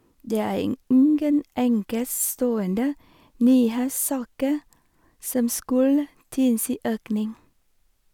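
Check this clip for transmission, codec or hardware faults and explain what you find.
One fault is present: hard clipping from 3.47 to 3.57 s. For that tenth of a second the speech drives a stage about 1 dB past its limit, so the peaks are sliced flat. The squared-off tops generate high harmonics, heard as brief crackle on the loudest moments.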